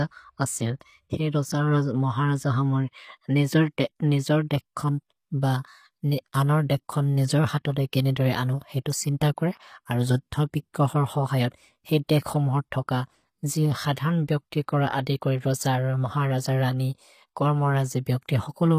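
Throughout the speech, the treble sounds synthetic and gritty, likely from HE-AAC compression. The upper band is rebuilt by copying lower bands upward, so harmonics misalign. S sounds turn metallic and lispy. Nothing remains above 14.9 kHz, which fits a low bitrate near 24 kbps.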